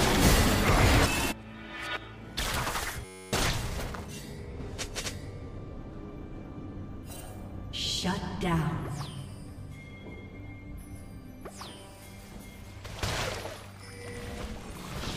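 The audio has a system hang loop from 3.05 to 3.33 s: a 10.67 ms slice, consistent with a 512-sample buffer, repeats exactly, giving a steady 93.8 Hz buzz rather than a stutter, while about 0.3 s of audio is lost.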